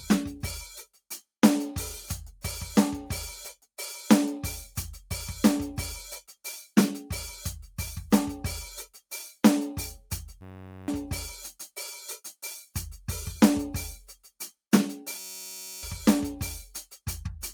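Between 0.84 and 1.24 s the music is hit by sound cut by the noise suppressor, which misreads sustained material as noise and pulls it down by about 15 dB, shortening decays. A waveform shows a sudden dip in level, and a spectrogram shows fading partials cut away.

At 10.41–10.88 s and again at 15.19–15.83 s, a system hang loop repeats one 10.67 ms fragment, which fits a 512-sample buffer, while the system stalls. It sounds like a steady 93.8 Hz buzz. The spectrogram shows evenly spaced harmonic stripes, and the waveform shows an identical repeating cycle.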